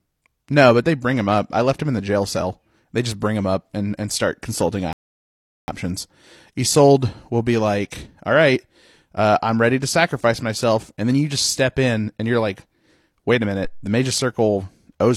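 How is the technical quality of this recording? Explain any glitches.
The recording has two glitches in the speech.

At 4.93 s, right after "and and start consulting", a rebuffering stall cuts the audio to silence until 5.68 s. The player ran out of downloaded data and waited for more. Speech then resumes exactly where it stopped. Nothing is lost, but 752 ms is added.

At 13.64 s a phantom power thump sounds, lasting until 13.95 s. A supply was switched on a live input. The voltage step passed through the coupling capacitors. It is heard as a deep low thud that decays in about 68 ms.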